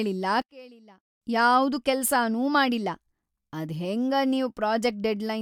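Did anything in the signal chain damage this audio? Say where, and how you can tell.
Yes. From 0.42 to 1.22 s the speech drops by about 24 dB. The level returns just before "ಯಾವ್ದೂ ಕೆಲ್ಸಾನೂ ಮಾಡಿಲ್ಲಾ". This is one channel inverted. The likely cause is a polarity swap in the analogue wiring. One side of the stereo pair is flipped. When the two sides are summed to mono, the centred voice cancels. Only the small difference between the channels survives, a faint copy of the speech.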